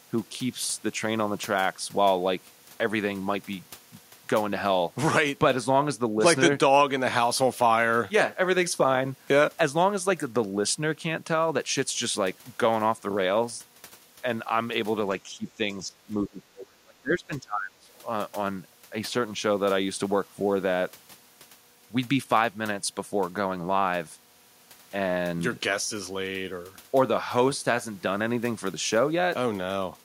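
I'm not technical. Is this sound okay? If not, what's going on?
No. From 15.24 to 17.89 s, the speech gets much quieter for about two seconds. This is likely speech suppressed in double talk, with both sides talking at once. Right after, from 17.96 to 18.0 s, a very faint scrap of another voice comes through. That is likely the other side's voice leaking through from a loudspeaker.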